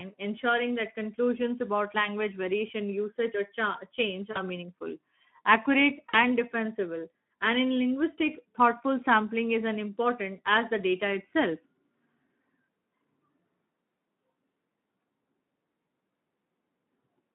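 From start to finish the speech sounds hoarse and grainy, squeezed into a narrow band between about 150 Hz and 3.4 kHz. This is Speex codec damage: too few bits for the excitation, which fits a rate of around 11 kbps.

From 4.31 to 4.42 s, just before "meaningful accurate", the voice smears into a fading buzzy tone or coloured noise, and again from 6.09 to 6.18 s, right after "meaningful accurate". Both are VoIP packet loss concealed by the speech codec. About 40 ms of audio went missing each time, and the decoder stretched its last pitch and filter while lowering the gain.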